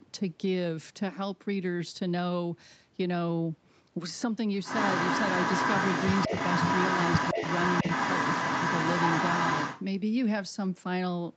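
From 4.63 to 9.84 s a second copy of the speech trails the first by 172 ms, at roughly the same loudness as the direct sound. This is an echo leak, likely from a loudspeaker on one side of the call whose echo canceller let part of the microphone pickup through. The fixed delay and the copy's speech-shaped character set it apart from room reverberation, which smears into a diffuse tail rather than repeating discrete syllables.

Inside that stretch, from 7.34 to 7.44 s, the speech dips by roughly 10 dB for about a tenth of a second. This is speech suppressed in double talk, likely caused by the canceller mistaking the talker for echo while both sides were active and pulling the level down. It differs from a packet-loss dropout because the sound quietens instead of vanishing outright or being patched with a synthetic fill, and it sits against the 8 kHz band limit of the call path.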